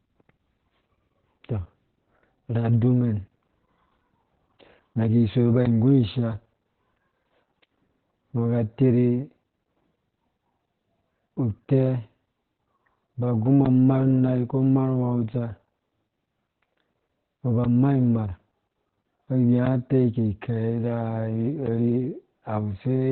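From start to end the speech carries heavy Opus voice compression. Nothing is left above about 4.4 kHz, so the coder is running narrowband in its SILK linear-prediction mode. The loss of sibilance and top end points to a bitrate near 8 kbps. The excitation is coded coarsely, so the voice sounds muffled, hoarse and slightly robotic, with a thin, boxy quality that never lifts at any point in the clip.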